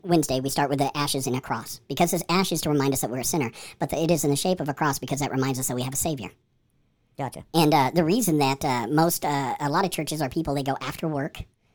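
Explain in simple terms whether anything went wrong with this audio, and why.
The speech sounds high and hurried from start to finish, as if someone pressed fast-forward: everything runs one and a half times too fast, and the pitch sits about seven semitones higher than it should. That's a wrong sample rate. The recording was played back faster than it was made, with nothing converting between the two, so speed and pitch rose together. A 1.5 ratio fits audio recorded at 32 kHz being played at 48 kHz.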